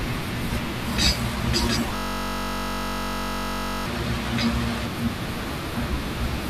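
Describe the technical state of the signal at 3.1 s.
At 3.1 s the signal is caught in a system hang loop, which runs from 1.96 s to 3.86 s. The playback path stalled while the audio hardware kept replaying one 21.33 ms slice of its ring buffer, a length that fits a 1024-sample buffer. That slice repeats about ninety times at 46.9 Hz, so the speech is replaced by a steady, flat buzz. On a waveform, identical short cycles tile the span; a spectrogram shows a dense comb of harmonics spaced 46.9 Hz apart, unchanging until 3.86 s.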